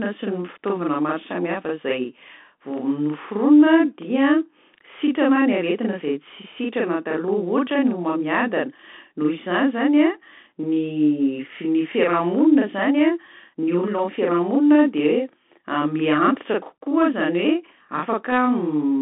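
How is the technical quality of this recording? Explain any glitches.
The technical quality is poor: two faults run through the whole speech recording.

A channel delay (doubling) lasts from start to end. One channel arrives about 40 ms late and the two are summed to mono, so every syllable is followed by an equal-level copy. This gives a slapback doubling rather than a comb-filtered, hollow phasing, which would come from a much shorter offset.

The Bluetooth CVSD headset codec is also present throughout. The band sits at roughly 200 Hz to 3.5 kHz, with nothing above 3.8 kHz. The one-bit, 64 kbps delta coding, which fits a CVSD link, follows the waveform with an adaptive step. That leaves plainly audible granular hiss, scratchy sibilants and distortion on loud high sounds. A plain low-pass filter would sound muffled but clean.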